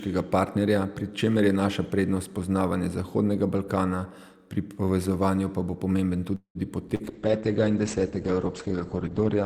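A speech clip with three call-transport faults close together. From 6.35 to 6.58 s there is a call audio freeze: the last sound stretches into a fading buzz or hiss, drops to silence for about 90 ms, then resumes exactly where it stopped, so about 0.2 s of delay is added and nothing is lost. That pattern likely comes from packets stalling in transit and the jitter buffer running dry. At 6.95 to 7.03 s, short concealed packet loss sounds different: a brief smear lasting about 45 ms, where about 40 ms of real audio never arrives and is patched over. From 7.06 s to the end, a call bitrate drop from 64 to 9 kbps makes the sound rough and watery and cuts the top end from 20 kHz to 8 kHz. Unlike the two brief glitches, this dullness persists rather than passing.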